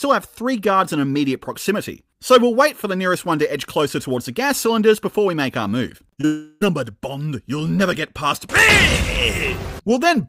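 Short concealed packet loss smears the sound at 5.97–6.01, 6.13–6.19 and 6.21–6.25 s: 20–40 ms holes patched by extending the preceding sound, unlike a clean cut. From 6.25 to 6.63 s a fading synthetic continuation fills about 360 ms without reaching silence, likely a long network dropout, far longer than the brief patches before it.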